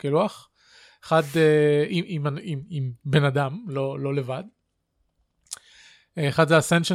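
No technical faults can be heard anywhere in this speech.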